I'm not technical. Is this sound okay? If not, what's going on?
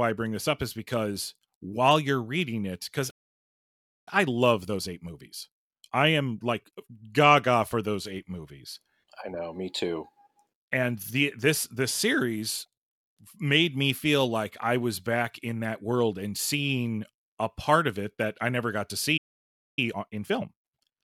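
No. There are two related problems, each happening twice.

The first is a playback stall. Right after "you're reading it because", the speech goes silent from 3.10 to 4.08 s, almost a full second, and again after "I never got to", from 19.17 to 19.79 s, about 0.6 s. The likely cause is the player running out of data or being held up. Unlike a dropout, where a piece of the speech is lost, nothing is missing here. The speech simply freezes and then carries on from where it stopped.

The second is time-compressed catch-up, which follows each stall. From 4.08 to 7.08 s the speech runs about 1.15 times faster, until just before "gaga for those eight". From 19.79 s to the end it runs about 1.25 times faster. The player is making up for the lost time by cutting out tiny slices and blending the joins. Unlike a recording that is simply sped up, the voice keeps its normal pitch instead of sounding squeaky, but it has a hurried quality.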